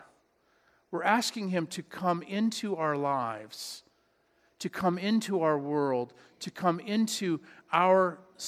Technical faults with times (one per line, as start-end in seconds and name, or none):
none